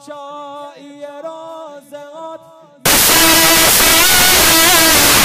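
At 2.86 s the audio collapses into loud, broadband hiss that lasts to the end of the clip at 5.25 s. These are samples built from the wrong bytes: the decoder has misassembled each sample, so the rapidly fluctuating low-order bits are treated as the most significant part of each value. Unlike clipping or heavy distortion, where the underlying sound stays recognisable beneath the damage, this replaces it with near white noise on the loud passages.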